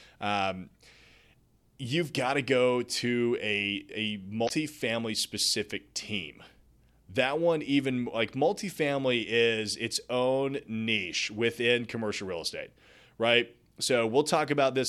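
A speech recording with one brief fault. Between 4.45 and 4.50 s there is a short burst of damaged data in a compressed stream. For about 50 ms the decoder gets frames it cannot read properly. Some bytes there are lost, blanked or replaced with unrelated data. The decoder misreads those frames and loses its place. It then hunts for the next valid frame header. The result is a chirp, squawk, click or short hole in the speech.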